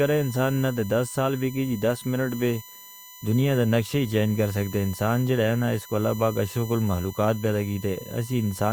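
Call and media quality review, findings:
USB whine, throughout speech, 0 s to end. Fixed-pitch tone on a 1 kHz series, strongest harmonic at 12 kHz, about 20 dB below the speech. Probable component: USB audio interface or its power and ground path. Mechanism: 1 ms bus frame current pulses coupling into the analogue supply or ground.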